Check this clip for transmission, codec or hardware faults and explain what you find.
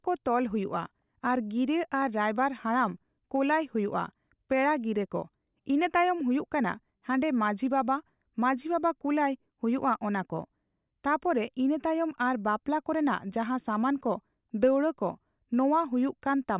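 No faults found.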